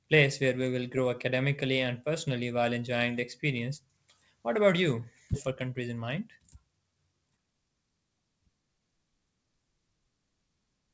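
Skip ahead at 5.34–5.36 s in this speech clip, just after "about you": roughly a second of audio is dropped while later audio was already queued, so playback jumps forward and both sides join with no gap. Jitter buffer speed-up at 5.48–6.57 s and 7.30–7.84 s: after the backlog built up, the receiver repeatedly cut short pitch-period pieces, running the speech about 8% and then 13% faster at unchanged pitch so it sounds hurried. Throughout, the call codec's band limit leaves nothing above 8 kHz, which fits G.722 at 64 kbps.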